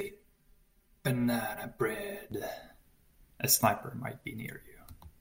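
Speech with channel delay (comb filtering) from 0.0 to 2.32 s: one channel lags around 5 ms before mono summing, cutting notches from near 100 Hz upward and making the sound hollow.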